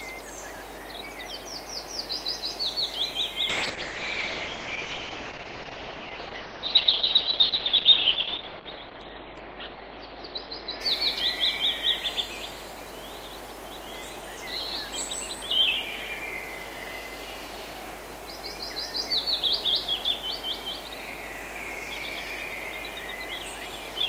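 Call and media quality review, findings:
Call bitrate drop, 3.51 to 12.13 s: audio goes muffled and coarse, then clears. Encoder side, bandwidth estimate fell, Opus pushed from 40 to 7 kbps, band cut from 20 kHz to 4 kHz, bottoming out about 5 s.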